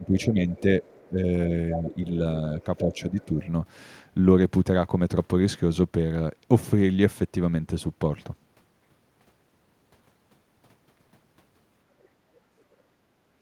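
A speech recording whose first few seconds show speech suppressed in double talk at 0–0.52, 1.09–1.19, 1.75–1.97 and 2.78–3.4 s. The talker dips by roughly 10 dB in the first two and about 5 dB later, likely because the echo canceller turned everything down while both sides spoke. On a waveform these appear as sudden envelope notches, and on a spectrogram as thinned, faded bands. The other side's voice is leaking through at 0.56–1.08, 1.72–1.98, 2.61–3.25 and 12.02–12.08 s. It is mostly faint, about 30 to 40 dB down, but near 1.8 s it comes up to roughly 10 dB below the talker. This is likely residual loudspeaker echo, seen on a spectrogram as a weak second set of harmonics under the main speech.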